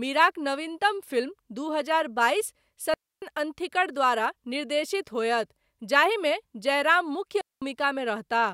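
At 2.94 s the speech drops into a clean hole of near silence lasting about 0.28 s, through to 3.22 s, and the same thing happens again from 7.41 to 7.62 s for roughly 0.21 s. That's a digital wireless dropout: the radio link lost too much data, so the receiver muted itself with a very quick fade rather than passing garbage. You can tell because there's no crackle or noise burst either side, just a tidy gap.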